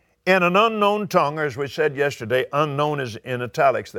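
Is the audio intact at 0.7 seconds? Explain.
Yes, the audio is intact at 0.7 seconds, with no fault audible at that moment.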